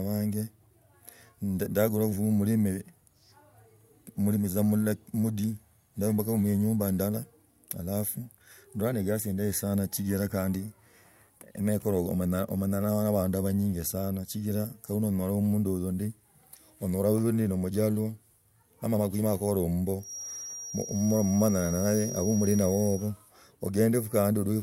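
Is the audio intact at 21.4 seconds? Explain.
No. A feedback whistle runs from 19.97 to 23.12 s: a thin, steady tone at 5.7 kHz sitting about 15 dB below the speech and slowly swelling and fading in level. It likely comes from a loudspeaker-to-microphone loop held just short of runaway feedback.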